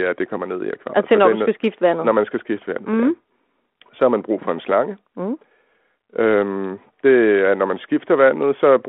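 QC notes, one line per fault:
No faults are heard in this speech clip. The telephone path sounds like G.726 ADPCM at 32 kbit/s, confined to roughly 250 Hz to 3.4 kHz, with only light coding grain that follows the speech level.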